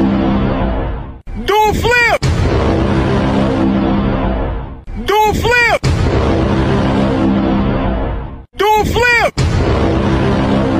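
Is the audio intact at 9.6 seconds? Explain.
Yes, the audio at 9.6 seconds is intact, with no dropout, click, distortion or other fault at that moment.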